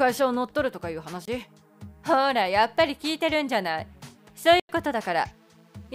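At 1.25 s the audio drops into a block of digital silence for about 23 ms, which fits a 1024-sample buffer that wasn't filled in time. It's a hard cut with no fade. At 4.60 s a longer block, about 93 ms, consistent with a 4096-sample buffer, leaves a short hole.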